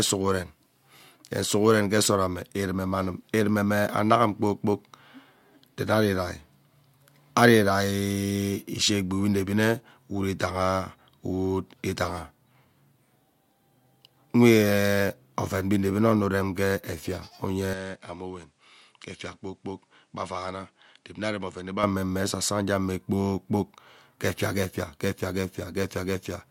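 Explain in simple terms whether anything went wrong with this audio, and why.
Between 17.73 and 21.83 s the speech goes duller, quieter and faintly noisier at once, likely an input switched to a poorer device, unlike muffling.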